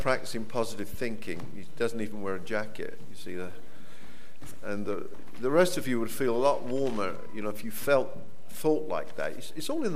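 At 0.94 s there is a brief, slightly grainy blip where the sound loses its clear tonal shape for an instant and then carries straight on. These are lost LE Audio frames: a gap of about 10 ms, which fits a single missing Bluetooth LE Audio frame. The LC3 decoder filled it by repeating the previous spectrum with randomised signs, so tonal content turns briefly noisy. The gap was too short for the concealment to fade toward silence.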